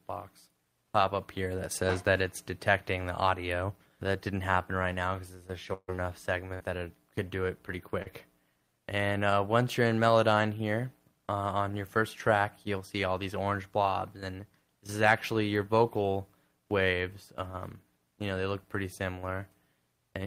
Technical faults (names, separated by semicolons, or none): burst of packet loss; short concealed packet loss